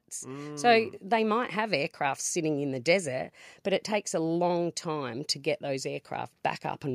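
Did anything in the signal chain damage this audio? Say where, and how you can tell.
Yes. Voice and background swell together by about 4 dB from 0.23 to 1.01 s, before "they might have aircraft". This is automatic gain rising in call processing, as the gain control boosts a quiet input.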